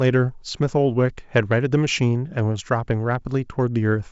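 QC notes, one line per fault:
No faults heard.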